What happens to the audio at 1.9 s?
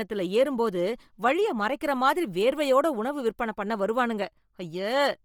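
Bluetooth LC3 compression is likely at work at 1.9 s, as throughout the speech: a low bitrate, fitting about 32 kbps in 10 ms frames, discards much of the upper spectrum and refills it with noise, giving heavy, breathy, grainy hiss up toward 20.2 kHz.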